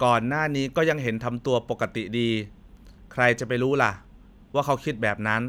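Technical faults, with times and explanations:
Nothing technical stands out here; the speech comes across steady and intact the whole way, with no glitches worth flagging.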